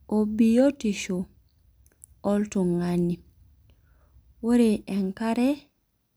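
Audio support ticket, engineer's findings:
No faults found on review of the speech recording; no dropouts, distortion, timing or level problems detected, nothing to escalate.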